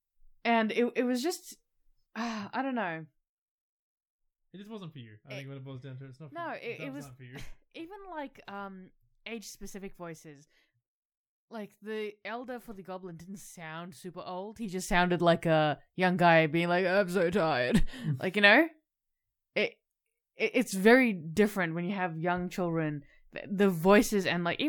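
No technical faults are audible.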